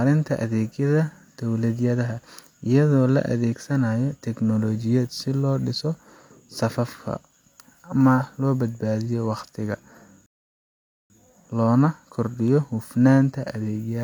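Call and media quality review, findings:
Rebuffering stall, 10.26 to 11.10 s. Speech drops to silence, then resumes exactly where it stopped. Nothing missing. About 0.84 s added to playback. Player buffer ran dry. Playback halted until more audio downloaded.

Electrical switching spike at 12.48 s. Sharp snap, about 1 ms, laid on top of the speech. Not part of the speech itself. Likely a nearby switch, motor or static discharge arcing, picked up on the audio line.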